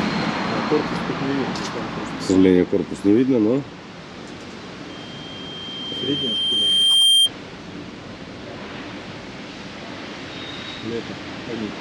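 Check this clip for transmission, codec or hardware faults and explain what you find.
There is one fault. A loudspeaker feedback squeal runs from 4.89 to 7.31 s. The microphone is picking up its own loudspeaker, and the loop gain goes above one at 3.2 kHz. That tone swells over roughly two seconds until it sits about 10 dB above the sound.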